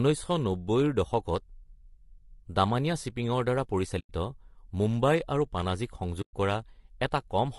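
Throughout, the speech sounds rough and grainy. Noise fills the gaps between pitch harmonics, and the top band sounds thin and synthetic. This is likely low-delay AAC compression (AAC-ELD), and the damage points to a low rate near 32 kbps. A spectrogram shows smeared harmonics and patchy, noisy high frequencies.

AAC frame loss with muting leaves soft-edged holes from 3.99 to 4.10 s (100 ms) and from 6.21 to 6.34 s (120 ms). The decoder zeroed the missing spectrum, so the sound fades out and back in. The waveform shows tapered gaps, and the spectrogram shows blank vertical strips.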